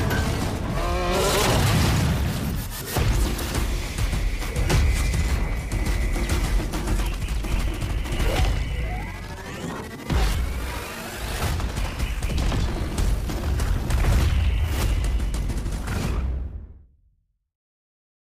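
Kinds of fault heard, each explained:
Time-stretched section: from 6.92 s to the end, pace jumps to 1.9 times speed at unchanged pitch, likely software fitting length; spectrogram shows compressed events, harmonics at the same heights.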